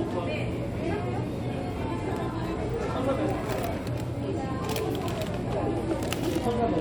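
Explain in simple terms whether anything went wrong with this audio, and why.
Nothing went wrong; no problems can be heard.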